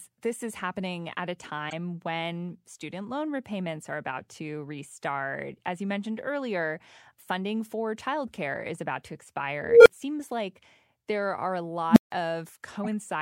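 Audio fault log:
1.69–1.73 s and 12.84–12.88 s: corrupt frame decoded. Between "is happening at a" and "when student loan repayments" there is a brief squeaky blip, and near the end a similar burst. The decoder played damaged compressed frames as if they were valid, so misread gains and codes put energy at the wrong frequencies. The first event spans roughly two frames and the second roughly four, each peaking at about −20 dBFS.
9.62–9.87 s and 11.90–12.12 s: unstable filter. After "childcare is about to", a tone of roughly 500 Hz swells for 236 ms into a loud clipped beep, then drops out for 10 ms before "seems like there are". After "like there are a", a lower tone of roughly 200 Hz builds in 65 ms and is followed by 160 ms of silence. A recursive filter with bad coefficients fed back on itself until its output overflowed, cutting out until the filter reset.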